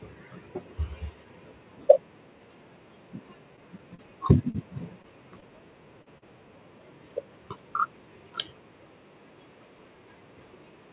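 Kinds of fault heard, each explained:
Short stall from a late packet: The jitter buffer ran dry when packets arrived late at 3.56, 5.02 and 5.40 s. The receiver held the preceding speech for 17 to 22 ms, then resumed without losing anything, leaving a briefly stretched sound with a slight buzz or dip.
Short concealed packet loss: At 3.95, 4.50, 6.02 and 6.18 s, 40 ms of speech never reached the decoder. The receiver extrapolated the previous sound across each gap and blended back in, heard as a short smear or wobble over the 4 kHz-limited G.711 call audio.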